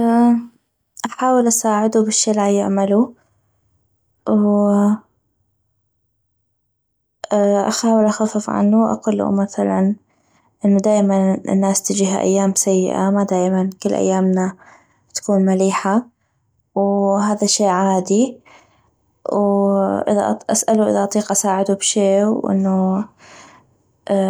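Nothing here to flag: it's a speech recording, and there's no technical fault to point to anywhere along it.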